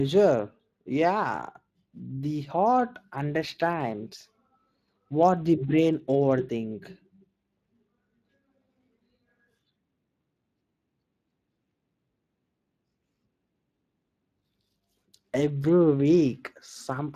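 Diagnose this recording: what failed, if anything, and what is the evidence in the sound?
The failure is at the codec stage: Speex coding damage runs through the whole speech recording. The speech has a plainly audible hoarse, noisy roughness. This fits a CELP coder short of bits for its excitation signal, at a rate around 22 kbps. Nothing is present above 15.2 kHz. It differs from packet loss because it is continuous, with no dropouts or bursts. It lacks the swirling, warbling tonal smear of a transform codec.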